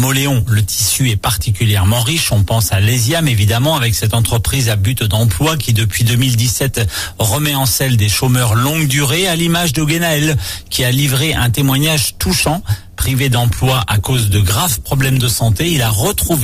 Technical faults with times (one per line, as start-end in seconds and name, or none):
13.51-16.43 adaptive stream at a lower bitrate